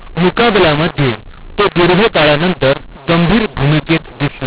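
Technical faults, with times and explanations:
Throughout: mu-law and A-law mixed up. The speech was coded with the mu-law variant of G.711 but decoded as if it were A-law, so each 8-bit code is mapped onto the wrong logarithmic curve. Sample levels come out scrambled, some inflated and others shrunk, giving a harsh, distorted edge to the speech. The quietest codes land well above silence, so the gaps between phrases fill with a noisy hiss. The 8 kHz telephone channel itself caps the audio below 4 kHz.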